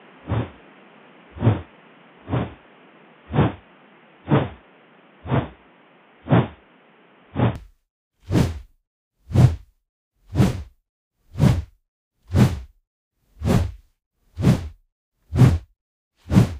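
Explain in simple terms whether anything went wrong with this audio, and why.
For the first 7.56 seconds, the sounds are dull and boxy, as if heard through a cheap phone, with a faint new layer of background noise underneath. Then, at 7.56 s, they suddenly open up and become clear and full, with no gap and no jump in loudness. This is likely an input switched to a poorer device. The recording started on a lower-quality microphone or headset that captures nothing above about 3.6 kHz, so the bright, crisp parts of the sound were missing until the better input took over.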